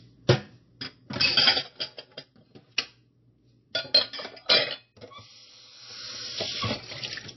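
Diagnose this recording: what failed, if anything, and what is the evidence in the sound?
The codec stage is the likely culprit here, specifically MP3 compression, and it affects the whole clip. Nothing comes through above 5.8 kHz, so the top end is missing throughout. The encoder artefacts are plainly audible, with a watery, swirly texture where weak frequency lines drop in and out from frame to frame. That all points to an encoder starved of bits at a low rate, roughly 26 kbps, so it cut the treble and zeroed whatever it judged least important.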